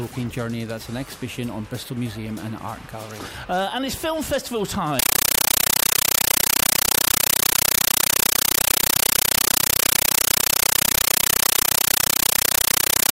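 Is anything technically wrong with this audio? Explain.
Yes. From 4.99 s to the end, there is a compressed stream played as audio. A Dolby Digital bitstream, apparently sent over a digital link, reaches the output undecoded, so its coded frames are reproduced as if they were samples. Each frame becomes a burst of about 9.33 ms of noise, then zero padding, repeating 31.25 times a second. The result is harsh, very loud, chattering static that replaces the sound entirely.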